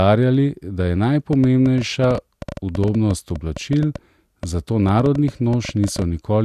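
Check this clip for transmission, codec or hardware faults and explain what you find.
There's one fault here, a train of clicks running from about 1.33 s to 6.03 s, so most of the speech has it. Irregularly spaced pulses of much the same shape arrive at roughly 7.7 per second, around forty in all, and they peak a few dB above the speech. That points to a likely source of interference from nearby equipment or a struggling interface. You hear it as uneven ticking on top of the speech and in the pauses.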